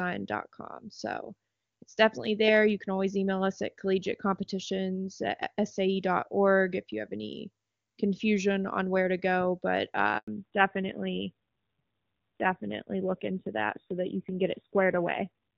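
At 10.18 s, just after "where to go but", the call was handed from one network to another and no speech frames arrived while the link switched over. The result is a handover gap of 100 ms, lasting until 10.28 s. The sound fades out within a few tens of milliseconds and drops to silence until the new connection begins carrying audio. Anything spoken in that window is simply missing.

From 10.28 s to the end of the clip the call falls back to narrowband. The codec drops from HD Voice, whose clear, full-bodied sound before the handover fits AMR-WB running at about 23.85 kbit/s, to an older narrowband codec, likely AMR-NB at a low rate around 7.4 kbit/s. Nothing above 4 kHz survives, so the speech loses its airy top end and sibilance detail. It sounds duller and muffled, with a rougher texture from the lower-rate coding.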